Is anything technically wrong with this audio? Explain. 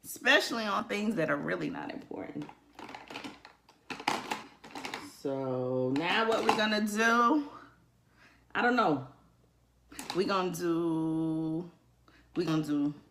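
Yes. Compressed frames are skipped at 0.79–0.82 s, 4.43–4.48 s, 10.03 s and 12.47–12.50 s. Each time, the audio jumps ahead by roughly one to three whole frames, which fits a 20 ms frame length. There is no silent gap, unlike a dropout. Each join is heard as a brief glitch where the audio jumps ahead.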